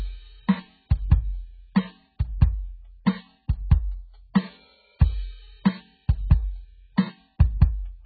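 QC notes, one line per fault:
Throughout: AAC compression is the likely cause of dull, smeared music with nothing above 4.6 kHz and heavy warbling damage, which fits a very low bitrate around 8 kbps.
3.05 s: pre-echo, a brief hiss of about 16 ms ahead of a sharp attack, as quantisation noise spread over the transform block fills the quiet moment before it.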